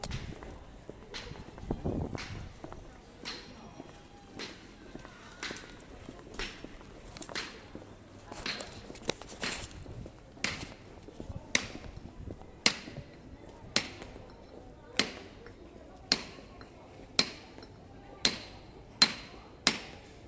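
No technical faults are audible anywhere in this recording of sounds.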